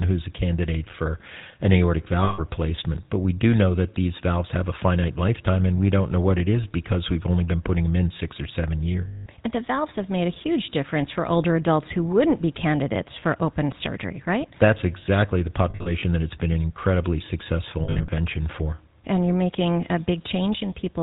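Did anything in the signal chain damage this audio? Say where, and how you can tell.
Yes. Throughout this speech, the sound has a buzzy, gravelly roughness and nothing above 4 kHz. That is the GSM full-rate codec at the coding stage. It models the vocal tract and drives it with sparse, regularly spaced pulses, which fits a 13 kbps full-rate encode.

Lost GSM frames on the network leg cause held, rough, metallic rings. These occur at 2.24 s for 140 ms and at 9.08 s for 180 ms. Shorter rings also come in scattered bursts from 15.7 to 16.04 s and 17.84 to 18.09 s, with the longest runs around 40 ms and 70 ms. The decoder fills each gap by repeating the last good frame's settings at falling level.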